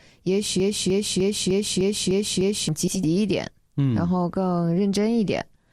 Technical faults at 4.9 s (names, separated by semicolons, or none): none